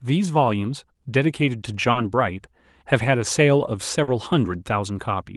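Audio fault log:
1.91 s and 4.03 s: short concealed packet loss. At each point about 40 ms of the call arrived too late for the decoder, so the receiver bridged the gap by extending the preceding sound, continuing its pitch where it was voiced and substituting shaped noise where it was not, then crossfading back into the received audio. The result is a brief smear or wobble lasting roughly 0.07 s, heard against a call path whose Opus coding leaves a top end near 12 kHz.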